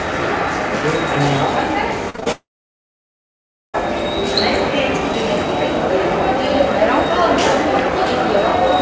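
From 2.10 to 2.28 s the sound turns choppy. This is repeated packet loss: four short gaps, the longest 39 ms, each patched by stretching the last sound, concealing over half the span. Then, from 2.32 to 3.76 s, the audio buzzes or hisses briefly, fades, and falls silent for about 1.3 s before resuming with roughly 1.4 s missing, likely a long network dropout. Throughout, the call path's G.722 coding leaves nothing above 8 kHz.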